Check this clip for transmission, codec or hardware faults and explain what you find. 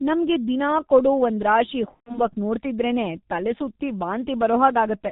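Two faults are present: low-bitrate codec coding throughout, and one concealed packet-loss event.

Throughout, the speech carries G.723.1 codec damage, consistent with its 6.3 kbit/s mode. Nothing passes above 4 kHz, and coarse 30 ms frame modelling makes the voice muffled and hoarse, with smeared consonants.

From 1.94 to 2.26 s, after "ನಮ್ಗೆ ದಿನಾ ಕೊಡೋ ಒಂದ್ರಾಶಿ" and before "ನೋಡ್ತಿದ್ರೇನೇ ತಲೆಸುತ್ತಿ", there is VoIP packet loss concealed by the speech codec. The gap fits roughly four lost 30 ms frames. The decoder extrapolates its last pitch and filter state, producing a fading, stretched sound that stays distorted briefly after packets resume.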